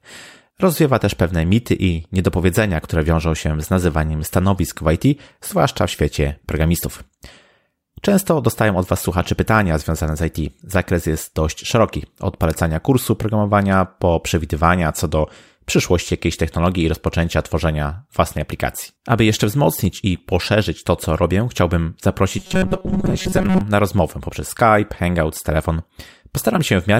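From 22.38 to 23.61 s, right after "to co robię chciałbym", the speech turns into robotic sound from repeated short buffers: a rigid, metallic buzz at 188 Hz that only loosely tracks the original. The likely cause is audio arriving too seldom, so the same 5.3 ms slice is replayed while the real audio is skipped. This happens for most of that stretch. On a spectrogram it shows as flat, evenly spaced harmonics at multiples of 188 Hz, and the waveform shows identical short cycles repeating.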